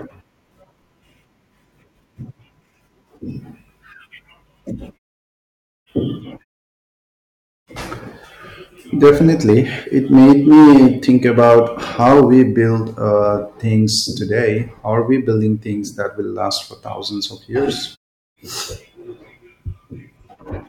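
Hard clipping hits the speech at 9.03 to 9.57 s, 10.13 to 11.59 s and 12.01 to 12.42 s. Peaks overdrive by about 9, 9 and 7 dB and are cut flat.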